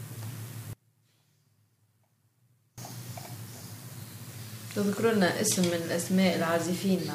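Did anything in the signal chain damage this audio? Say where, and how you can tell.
Yes. The path likely lost its main feed at an intermittent connection in the analogue wiring, while everything downstream stayed live, causing an audio dropout to a faint residue. At 0.73 s the sound cuts out abruptly, mid-flow rather than through a pause or fade, and returns just as suddenly at 2.78 s, about 2.0 s later. Through that gap only a faint leak of the signal remains, roughly 30 dB below its normal level.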